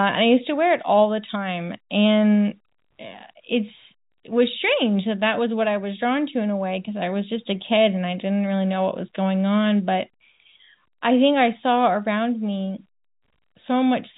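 No technical faults occur in this speech, so there is nothing to describe in time order.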